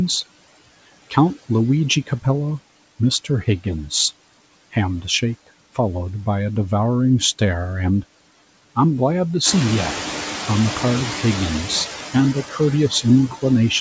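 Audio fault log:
throughout, noise suppressor artifacts: background sinks between phrases and swells beneath speech; the suppressor pulls steady-noise bands down by about 16 dB.
13.29–13.44 s, speech cut by the noise suppressor: speech turns faint and swallowed for roughly a tenth of a second, dipping about 14 dB as the suppressor mistakes it for noise.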